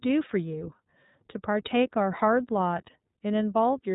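From start to finish the speech carries iLBC codec damage: nothing above 3.8 kHz, and a rough, synthetic edge that fits 30 ms frames at around 13 kbps.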